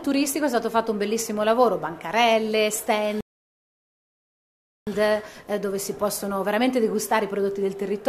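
At 3.21 s the sound drops to dead silence and then picks up at 4.87 s exactly where it left off. That's a rebuffering stall: the player ran dry of downloaded audio and waited for more, adding about 1.66 s without losing anything.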